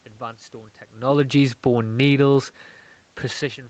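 From 1.85 to 2.24 s, automatic gain falling lowers the gain by about 4 dB, so speech and room noise sink together. The waveform envelope narrows, and the spectrogram dims evenly up to its 8 kHz ceiling.

Overlapping from 2.16 to 2.62 s, automatic gain rising adds about 4 dB after the input dropped about 16 dB. This wins back only part of the lost level, with voice and background swelling together. On the waveform the envelope widens again, and on the spectrogram the noise floor brightens along with the speech.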